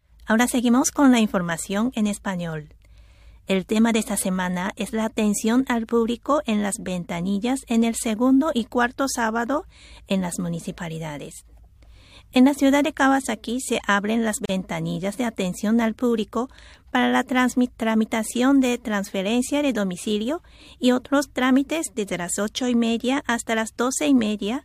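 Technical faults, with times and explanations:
14.45 to 14.49 s, gap at a join of encoded pieces: a 37 ms break where separately encoded segments meet with encoder start delay and end padding left in.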